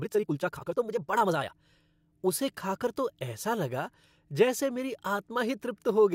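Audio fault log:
0.0–1.54 s, time-stretched section: speech runs at 1.93 times normal pace, sounding rushed where short pieces were dropped, then abruptly slows at 1.54 s. Pitch stays natural, unlike faster playback, which raises it. The cause is likely software squeezing the audio to fit a length.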